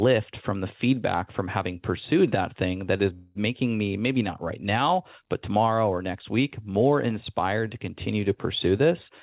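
Speech carried over a narrowband call path with nothing above 4 kHz, showing a call audio freeze from 3.14 to 3.37 s after "that thing that is". A stretch of about 0.21 s of fading, smeared buzz shows as flat horizontal bands on the spectrogram. The likely cause is a jitter buffer running dry, delaying the speech without losing any of it.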